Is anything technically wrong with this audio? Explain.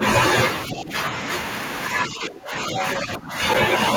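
Yes, there are two kinds of fault. From 0.67 to 0.92 s and again from 2.05 to 3.34 s, the speech is suppressed in double talk. The level sags by about 10 dB in the first stretch and by about 15 dB in the second. The likely cause is an echo canceller that, with both ends talking at once, cannot tell the near talker from loudspeaker echo and turns down the whole signal.

From 2.77 to 2.96 s, the other side's voice is leaking through at about 10 dB below the main speech, a brief scrap under the suppressed talker. This is likely residual far-end audio that the echo canceller failed to remove from the microphone signal after the device's loudspeaker played it.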